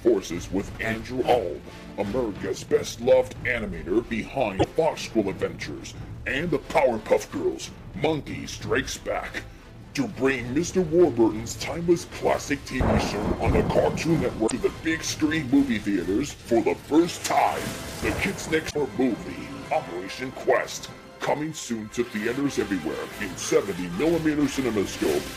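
Three brief glitches interrupt the sound, at 4.56 to 4.64 s, 14.43 to 14.52 s and 18.67 to 18.76 s, each under a tenth of a second. They come from damaged data in a compressed stream: corrupted frames confuse the decoder, which loses sync until it finds the next valid frame header.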